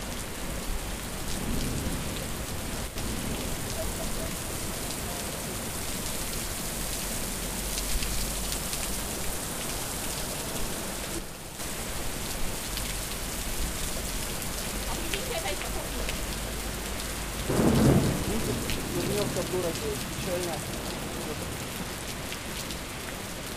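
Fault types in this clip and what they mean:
One channel drops out: the level falls abruptly by about 6 dB at 2.88–2.96 s and 11.19–11.59 s, likely one stereo side lost, and unlike a full dropout, sound never goes silent.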